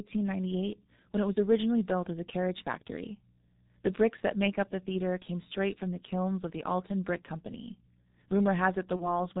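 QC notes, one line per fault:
Throughout: G.723.1 codec at 6.3 kbit/s with heavy coding damage, passing nothing above 4 kHz; the speech sounds muffled and hoarse, with blurred consonants.
8.96–9.19 s: VoIP packet loss concealed by the speech codec. The decoder extrapolates across a gap that fits a single lost 30 ms frame, producing a fading, stretched sound, and recovery is still audible until 9.19 s.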